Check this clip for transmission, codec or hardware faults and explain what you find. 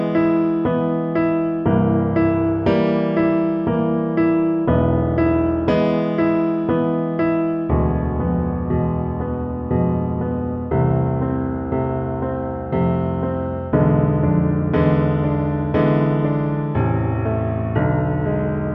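Nothing stood out on listening to this clip.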